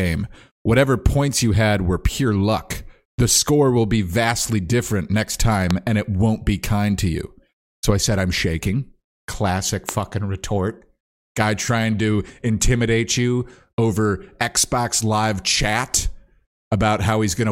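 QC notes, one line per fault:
5.71–5.73 s and 9.89–9.91 s, loud pop: a single sharp pop each time, peaking roughly 15 dB above the speech, which continues underneath. A sudden voltage pulse is the likely cause.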